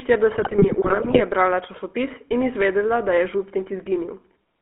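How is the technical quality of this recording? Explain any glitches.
The recording is clearly degraded: the speech has telephone-style coding damage throughout, and a burst of transmission corruption early on.

GSM full-rate codec: Through the whole clip the speech sits in a band of roughly 250 Hz to 3.4 kHz, with a buzzy, gravelly roughness. That fits 13 kbps GSM full rate, which rebuilds the voice from a vocal-tract model driven by coarse, regularly spaced pulses. A plain band-limited phone line would sound muffled but smooth rather than grainy.

GSM bit errors: From 0.38 to 1.23 s, ending just before "je brala časopis in", the speech breaks into squawks, pops and gargling. Corrupted filter, pitch and gain values distort each affected frame, which fits around 40 damaged frames at an error rate near 2 percent. Packet loss would leave gaps or smeared repeats rather than sudden bursts of level.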